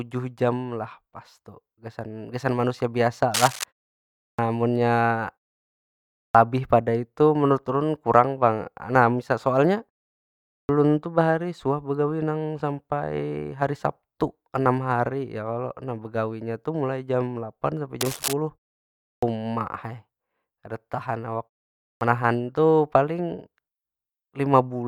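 Speech clip with two kinds of trouble. First, there's cable scratch noise: a short burst of dense, ragged crackle from 3.34 to 3.64 s, right after "gasan manusia", and again from 18.01 to 18.34 s. Both sit only a little below the speech level, so they really cut across it. That scratchy, uneven texture is likely a worn cable or connector being jostled, with its contact resistance jumping around for a moment. Second, there's a clipped start after a pause in five places: 4.30, 6.26, 10.60, 19.14 and 21.92 s. Each time the speech comes back in abruptly, with roughly 85 to 91 ms of its onset missing. Every one follows a gap of about half a second to one second (0.51 to 0.96 s), which points to the output device dozing off in the silence and taking a beat to wake up again before sound gets through.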